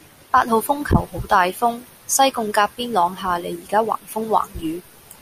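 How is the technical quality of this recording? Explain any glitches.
No glitches or technical faults can be heard anywhere in the recording; the signal stays stable and intact throughout.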